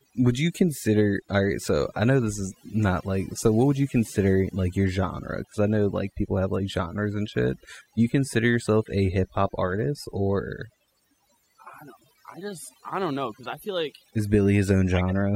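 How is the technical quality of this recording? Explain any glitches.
Overdone noise removal runs through the whole speech recording. The denoiser was pushed so hard that any frequency band near its noise estimate gets slammed down, taking quiet speech detail with it. Between phrases you get near silence with little twinkling specks.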